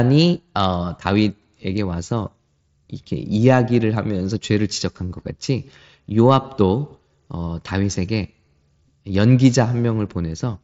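Concealed Bluetooth headset packet loss at 1.97 s: a single lost frame of about 7.5 ms between headset and phone was patched by repeating the closest-matching piece of recent waveform. It is almost inaudible in the mSBC wideband speech.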